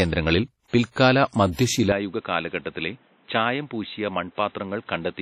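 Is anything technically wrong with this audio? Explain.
Yes. Two faults are audible in this speech clip.

Throughout, the audio has most likely passed through WMA compression. This transform codec quantises long blocks coarsely, so its error smears over tens of milliseconds, and weak spectral lines get dropped, here with heavy damage that fits a bitrate near 32 kbps. Nothing survives above 14.2 kHz, and the result is ringing, washy speech with a hiss that swells and fades along with the signal.

From 1.92 s to the end, the input likely switched to a poorer device, with no gap at the changeover. The new input passes a much narrower band, with nothing above 4 kHz, and brings its own gain and background noise. The speech turns dull and boxy, drops by about 5 dB, and sits over a new noise floor roughly 35 dB below it.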